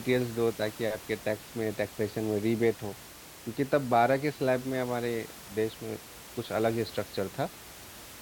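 A speech recording with no technical faults. The room's own background noise is audible behind the speech, sitting about 18 dB below it, and is part of the recording rather than anything the system added.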